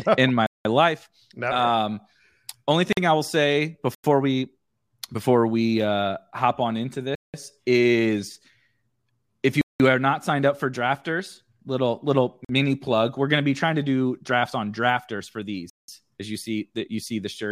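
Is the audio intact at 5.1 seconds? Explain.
Yes, at 5.1 seconds the speech plays through intact, with no dropout, click, distortion or other fault audible at that moment.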